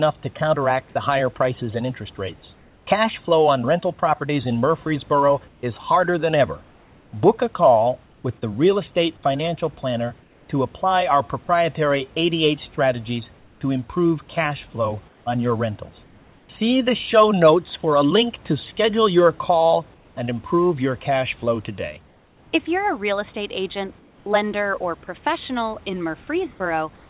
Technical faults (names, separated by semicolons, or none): comfort noise in place of the background